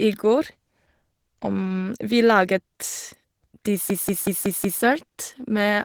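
A speech recording runs throughout with plainly audible codec damage. The voice sounds hoarse and muffled. The likely cause is Opus compression in its hybrid speech mode at a low rate, which fits about 16 kbps, though the band still reaches 20.3 kHz. From 3.90 to 4.83 s a system hang loop occurs. A single 186 ms slice of sound repeats five times, at about 5.4 per second. It comes across as a machine-gun stutter. This fits an 8192-sample buffer cycling while the system froze, with little or no audio lost around it.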